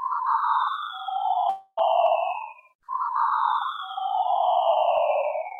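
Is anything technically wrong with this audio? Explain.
Yes. From 1.49 to 1.79 s, likely a long network dropout. Incoming audio stops, the receiver stretches the last sound into a fading buzz for about 0.28 s, then there's a brief silence, and playback resumes with that stretch missing.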